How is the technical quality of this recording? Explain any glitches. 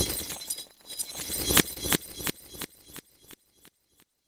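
One glitch stands out. From 1.73 to 1.78 s there is a brief smear and wobble, where short concealed packet loss meant the receiver extended the preceding sound to cover about 20 ms that never arrived.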